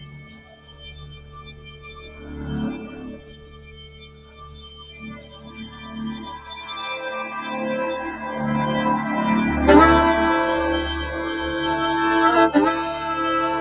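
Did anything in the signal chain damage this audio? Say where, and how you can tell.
Yes. The damage comes from a noise suppressor applied to music or sounds, active throughout in the call processing stage. Built for speech, it treats sustained tones, ambience and reverb as noise, so level swings by roughly 15 dB: onsets pass while held material is pulled down.

Sound cut by the noise suppressor is clearest from 0.0 to 2.47 s and from 2.81 to 5.95 s, with drops of about 13 dB. Steady or decaying parts sink or lose their tails, while sudden sounds mostly get through. The band stopping at 4 kHz fits a G.711 A-law call path and is normal.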